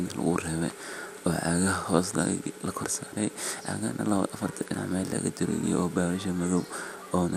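Throughout the speech the sound is dull and carries a gurgling, granular distortion, with nothing above 15.7 kHz. This is likely MP2 compression at a low bitrate, consistent with about 80 kbps, where starved upper sub-bands drop out and the rest are coarsely quantised.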